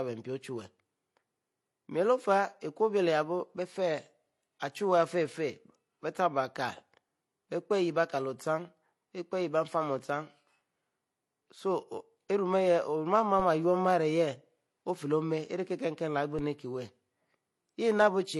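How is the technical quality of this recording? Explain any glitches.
The recording has two kinds of fault: layered compression artefacts throughout and two brief thumps later on.

Throughout, the speech is cut off above 12 kHz, with smeared, swirly artefacts, likely from transcoding between lossy codecs, such as an MP3 stage re-encoded as low-bitrate HE-AAC. A spectrogram shows a hard ceiling and blotchy texture.

At 13.40 s and 16.39 s, a DC step shifts the waveform's zero line. Each step is heard as a low thump and seen as a sudden baseline jump that decays away as a 20 Hz high-pass settles it.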